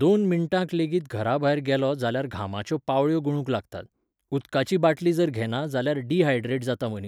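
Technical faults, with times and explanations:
Nothing to flag here; the recording runs without any technical faults at any point.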